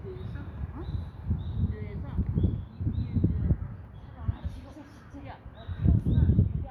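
No technical faults are audible.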